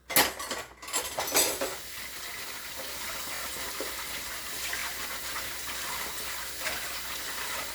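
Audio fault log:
3.35–3.39 s and 4.79–4.81 s, repeated frames. One 23.2 ms block of the sound plays again, twice more at the first point and once more at the second. Each restart causes a brief stutter. The length fits a 1024-sample frame at 44.1 kHz.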